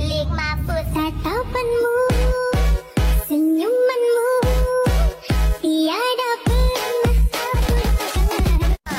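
From 7.41 s to the end at 8.99 s the audio has a time-stretched section, sped up about 1.88 times and sounding rushed while its pitch holds steady, likely from software squeezing it to fit a length. On a spectrogram, events crowd together horizontally with harmonics unshifted in frequency, and the waveform shows dense, abruptly joined segments.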